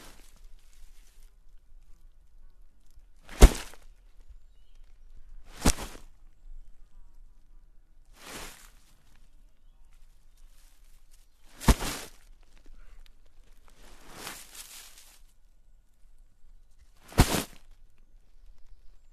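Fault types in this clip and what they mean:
Compressed frames skipped: whole blocks of the encoded stream never get played, either because they're missing or because the decoder rejected them as damaged, so the sound lurches forward. Frames here are 21.3 ms long. At 2.96 s about one frame goes (roughly 20 ms), and at 11.35 s and 14.27 s around four or five frames vanish, roughly a tenth of a second each.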